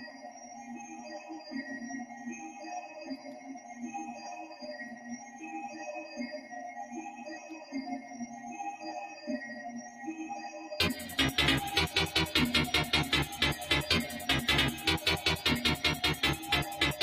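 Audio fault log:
Throughout: noise suppressor applied to music or sounds. A speech-oriented suppressor stays active, reading steady tones, ambience and reverb as noise and pulling them down. Its gain moves over a range of around 10 dB, so attacks pass while sustained material sinks.
0.11–0.70 s, 2.09–2.25 s, 3.17–3.75 s, 4.95–5.41 s, 9.85–10.01 s: sound cut by the noise suppressor. In each span the suppressor classes the sound as noise and drops it by about 5 to 6 dB at its deepest, so held or fading parts dip and decays shorten.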